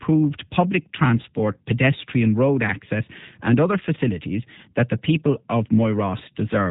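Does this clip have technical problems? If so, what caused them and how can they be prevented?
Yes. Throughout the clip the speech carries plainly audible G.729 codec damage, with a rough, slightly synthetic texture and nothing above 3.8 kHz. The roughness points to an 8 kbit/s G.729A path, where each 10 ms frame is rebuilt from a vocal tract filter, a pitch predictor and a few pulses. On a spectrogram, energy stops at a flat ceiling near 3.8 kHz. To prevent it, record or route the call through a wideband codec such as G.722 or Opus.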